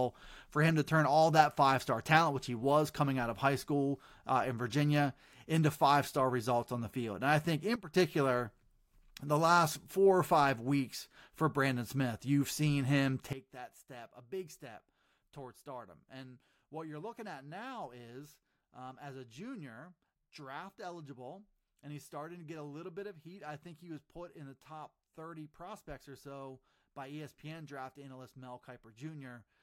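Speech with two abrupt level drops, voice and background falling together: about 12 dB from 7.76 to 7.94 s after "I think", and about 16 dB from 13.33 s to the end after "you've seen him". This is likely a sudden gain jump, digital gain changed between samples without a ramp.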